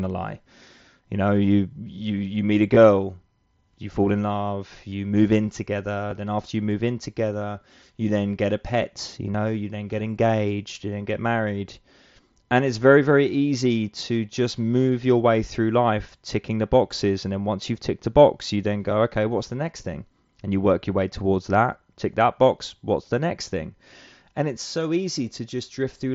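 Concealed Bluetooth headset packet loss hits this speech clip at 2.75 s after "you you meet a", 4.90–4.92 s between "you fall in love" and "move in together", 6.11 s after "move in together", and 9.32–9.34 s. Voice packets from headset to phone went missing, and the receiver filled each gap of about 7.5 to 22.5 ms by repeating the best-matching recent stretch of waveform. The gaps are brief, one to three lost frames, so the single lost frame at 6.11 s is nearly hidden, while the longer runs sound like a buzzy tone with a small warble where the speech returns over the wideband mSBC audio.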